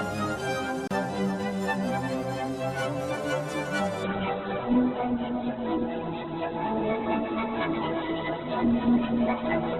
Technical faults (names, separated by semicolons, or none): block of digital silence; adaptive stream at a lower bitrate